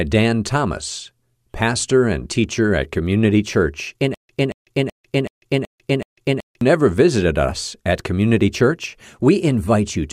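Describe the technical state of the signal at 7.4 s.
At 7.4 s the speech signal is intact, with no audible fault at that moment.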